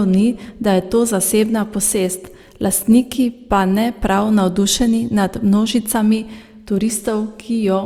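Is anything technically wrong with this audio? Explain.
No, nothing in this recording stood out as a technical problem on listening.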